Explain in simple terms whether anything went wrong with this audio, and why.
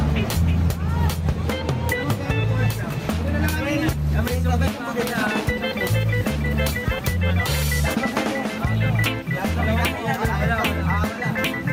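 Gain pumping runs through the whole clip, from start to finish. Loud and soft passages sit closer together than they should, and everything sounds squashed. The likely cause is a microphone level set far too high, with a fast limiter repeatedly pulling it back down. A noise gate would instead cut the background to silence in the gaps.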